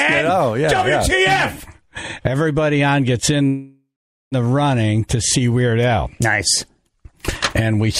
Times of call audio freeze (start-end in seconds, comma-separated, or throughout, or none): 3.47-4.35